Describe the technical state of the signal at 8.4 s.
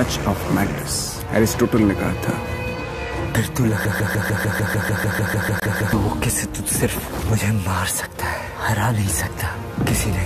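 At 8.4 s the signal is intact, with no dropout, clipping, glitch or other fault audible at that moment.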